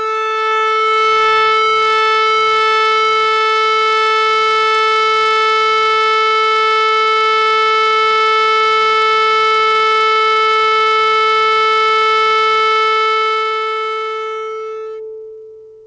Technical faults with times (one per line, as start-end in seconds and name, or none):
6.88-9.41 repeated stalls (stutter)
9.52-11.26 jitter buffer slow-down
12.98-15.33 jitter buffer speed-up